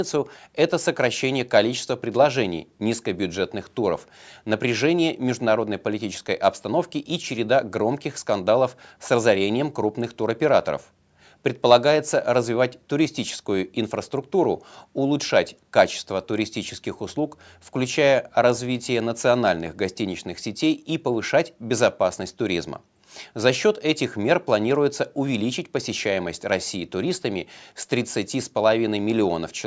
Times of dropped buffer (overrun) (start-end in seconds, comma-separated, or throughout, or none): none